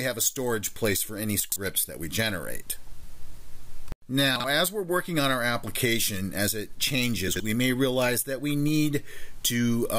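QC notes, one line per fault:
1.40–1.56 s, 4.36–4.44 s and 7.28–7.40 s: chunks out of order. In each, one 40 ms block plays late, after three, one and two blocks respectively, so the sound briefly jumbles and steps backwards. Unlike a dropout or skip, nothing is missing or silent. The same material is all present but rearranged. Three hard joins per event leave abrupt seams, which distinguishes it from a smooth glitch or stutter.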